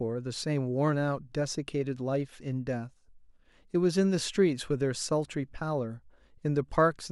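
Nothing stood out on listening to the speech in this recording.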